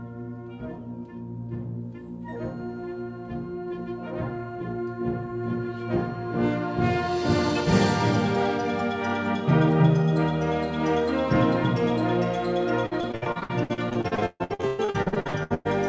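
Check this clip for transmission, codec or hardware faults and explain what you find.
One transmission fault is present: repeated packet loss (robotic sound) from 12.86 s to 15.67 s. Over this stretch, packets kept going missing or arriving too late. Each hole was patched by extending the last received sound, and the next dropout followed within moments. Concealment covers roughly half of those 2.8 seconds, with gaps of up to 141 ms. The audio turns choppy, with pieces dropping out. The band-limiting to nothing above 8 kHz is consistent with a wideband call codec such as G.722.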